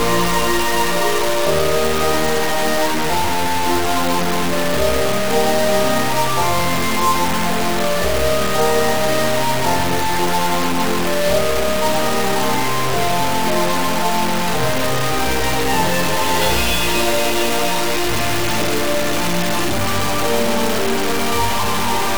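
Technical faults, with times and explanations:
Throughout, low bit depth without dither: the whole clip is heavily grainy, with a harsh distortion that moves with the sound and sits barely below it. Quiet passages crumble or sputter out. It's likely the audio was truncated to about 3 bits with no dither.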